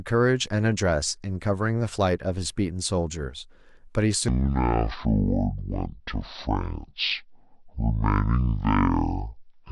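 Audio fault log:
4.28–9.72 s, section at the wrong speed: likely played against the wrong clock at 0.52x speed, so the speech drops about ten semitones and drags, deep and slow, to the end.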